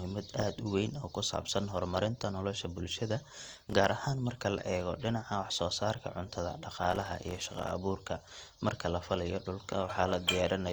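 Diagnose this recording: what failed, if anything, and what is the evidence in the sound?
The fault is at the driver/buffer stage: processor overload crackle in two bursts, at 3.36 to 3.73 s (after "saabsan horumarinta nolosha bulshada") and 6.90 to 7.71 s (before "abuurka marka la falaayo"). The processor missed many very short buffer deadlines in a row, and each miss became silence. On the waveform the speech is chopped by tiny flat gaps. The spectrogram shows dense vertical broadband streaks, far more of them in the longer second burst.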